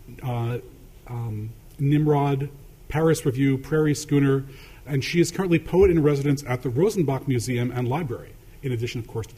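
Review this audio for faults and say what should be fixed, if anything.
A drift correction step runs from 6.02 to 6.65 s: the audio slows by 5.66% and drops 101 cents, about a semitone, then snaps back to normal. The likely cause is clock-matching software changing the playback rate in a single jump to rebalance its buffer. Unlike wow or flutter, the shift is abrupt and steady, not a gradual, repeating wobble. To prevent it, apply drift correction in small, continuous rate adjustments.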